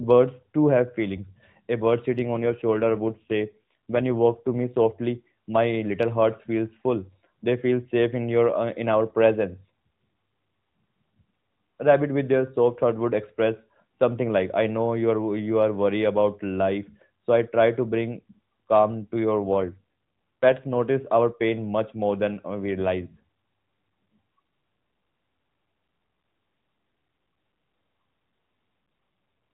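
From 2.08 to 4.93 s, and again from 19.41 to 20.80 s between "bring calm to your" and "our pain much more", an AMR rate drop makes the narrowband speech rougher and more synthetic without gaps, consistent with a fall from 12.2 to 5.9 kbps.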